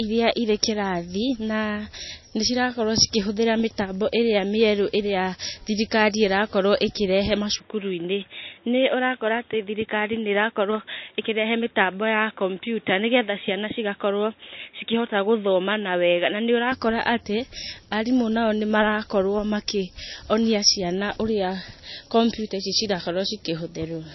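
MP3 compression runs through the whole recording. The speech has nothing above about 5.8 kHz, where the encoder cut off the treble, and the codec damage is plainly audible: weak frequency components drop in and out from frame to frame, giving a watery, swirling texture with chirpy sibilants and smeared onsets. The narrow band and heavy artefacts point to a low bitrate, likely around 24 kbps.

Input switched to a poorer device, from 7.56 s to 16.72 s. With no gap at the switch, the band narrows further to nothing above about 3.8 kHz, so the speech turns dull and boxy while its loudness stays about the same. A faint new noise floor sits far below the speech. The switch comes just before "atĩ arimũ nao nĩ", and the full band returns at 16.72 s, which fits the recording likely changing to a headset call profile or lesser microphone and then back.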